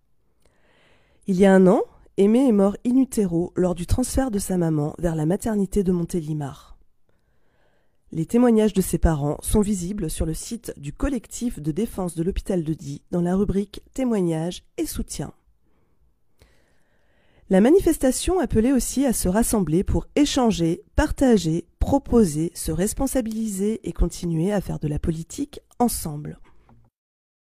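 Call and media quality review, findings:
Nothing stood out on listening to the clip, and there are no findings to log.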